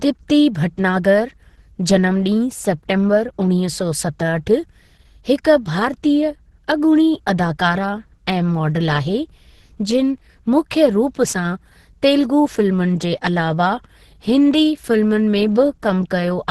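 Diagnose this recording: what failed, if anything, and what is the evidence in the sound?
The codec stage failed: throughout, the speech sounds muffled, hoarse and grainy, with nothing above 12.1 kHz. This points to likely Opus compression in hybrid mode at roughly 12 kbps. A spectrogram shows a flat ceiling at 12.1 kHz over noisy, smeared bands.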